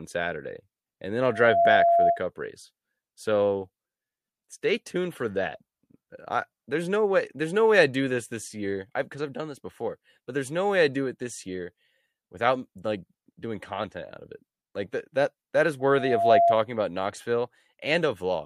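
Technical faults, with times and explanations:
1.25–2.22 s and 15.79–16.59 s, loudspeaker feedback squeal: after "and then" and "that that that is", a 684 Hz tone swells over about half a second to sit above the speech, louder the second time, as mic-to-speaker loop gain tops one there.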